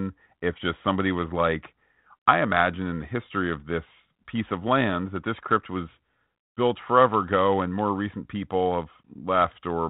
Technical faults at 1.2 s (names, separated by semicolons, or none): none